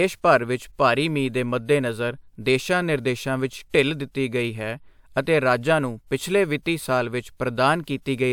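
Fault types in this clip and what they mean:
No technical faults can be heard anywhere in the speech recording, whose level, continuity and timing stay steady throughout.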